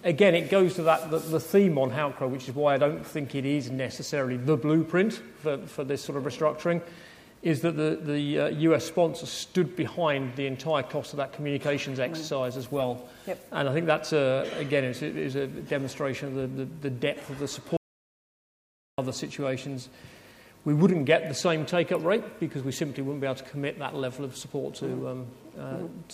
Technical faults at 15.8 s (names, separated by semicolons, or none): none